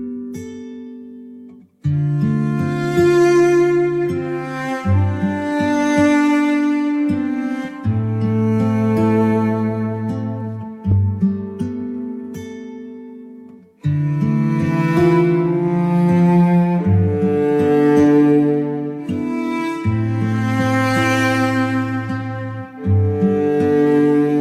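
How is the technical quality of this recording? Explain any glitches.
The technical quality of this recording is sound, with no glitches to explain.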